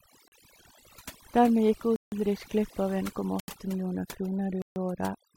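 Overdone noise removal runs through the whole speech clip: bands near the noise estimate are pushed almost to nothing, leaving twinkling specks in the background. Blocks of digital silence fall at 0.28 s (40 ms), 1.96 s (160 ms) and 3.40 s (80 ms), hard cuts to silence, likely from output buffers not filled in time.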